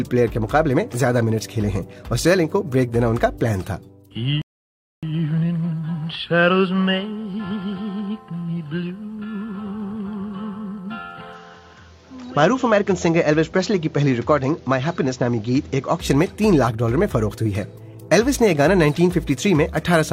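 A rebuffering stall runs from 4.42 to 5.03 s: the audio drops to silence for 0.61 s and then picks up exactly where it stopped, because playback ran out of downloaded data and waited for more, so nothing is lost but the clip is stretched. An input switch to a poorer device follows from 11.33 to 16.00 s, where the sound turns duller, with nothing above 7.4 kHz and a new background noise floor roughly 35 dB under the signal, while the level stays about the same and there is no gap at either boundary, likely from the system moving to a narrower-band microphone or headset profile and back.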